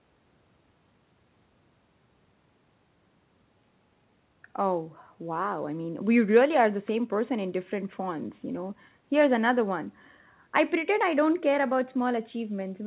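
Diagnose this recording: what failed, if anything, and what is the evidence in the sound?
Nothing failed: the speech comes through the call path intact, with the expected band limit at 4 kHz and the character of a narrowband telephone codec, consistent with G.711 mu-law at 64 kbps.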